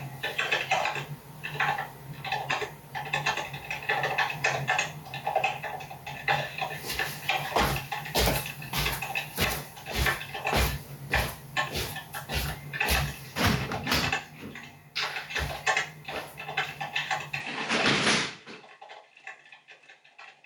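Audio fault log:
Throughout, gain pumping: the gain ducks about 25 dB under each loud sound. Likely a fast limiter taming excessive gain.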